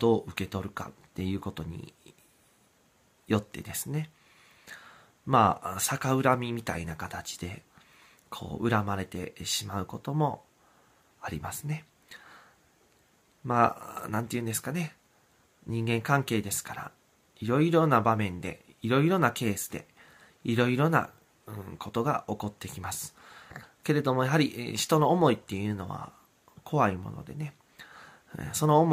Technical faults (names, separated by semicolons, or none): none